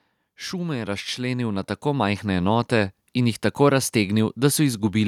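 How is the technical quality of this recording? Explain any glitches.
The recording has one clear fault: automatic gain rising, from 0.22 s to 2.53 s. The automatic gain control judged the incoming level too low and pushed its gain up step by step, by about 9 dB across those two and a bit seconds. Because the boost applies to the whole signal, the speech and the background noise swell together, so the level creeps upward and the room sound grows louder along with the talker.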